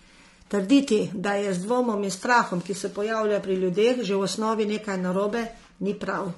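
Low-delay AAC compression runs through the entire speech clip. The voice sounds rough and grainy, with noise filling the gaps between pitch harmonics. This is likely from AAC-ELD coding, whose short frames resolve harmonics poorly, and the clearly audible damage fits a bitrate around 32 kbps.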